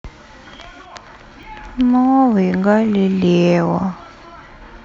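Speech with a skip at 1.43 s where about 20 ms of sound vanishes and the audio jumps ahead without any gap, likely a dropped buffer (overrun). A waveform shows an abrupt discontinuity; a spectrogram shows a thin vertical broadband line.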